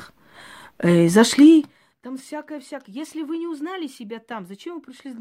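No technical faults can be heard anywhere in this speech recording. The level moves smoothly where it rises or falls, the way a fader would shift it, without jumps or steps.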